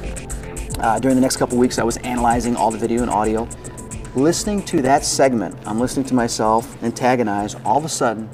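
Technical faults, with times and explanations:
4.65–4.89 s: processor overload crackle. A handful of roughly 5 ms buffers missed their deadlines and dropped to silence, leaving hard-edged gaps heard as gritty crackle.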